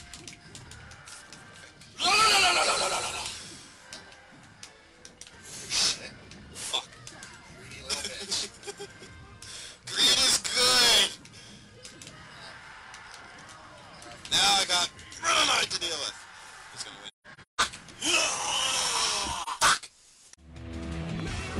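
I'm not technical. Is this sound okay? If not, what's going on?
No. Around 17.08 to 17.61 s there are several short gaps, the longest around 150 ms, and another brief dropout at 19.42 to 19.48 s. This is AAC frame loss with muting: chunks of data went missing, so the player filled them with silence, gently faded at the edges.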